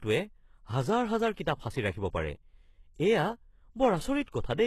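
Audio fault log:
Throughout, HE-AAC compression, likely the cause of the synthetic treble. Nothing survives above about 12.3 kHz. The upper band is rebuilt by copying lower bands upward, so harmonics fail to line up. Sibilants sound gritty and metallic. The heavy damage fits a low bitrate near 16 kbps.
4.25 to 4.28 s, pre-echo. A short hiss arrives about 29 ms before a sharp attack. The codec spreads its quantisation noise across the whole block, so noise meant for the loud onset leaks into the quiet gap ahead. The attack sounds smeared.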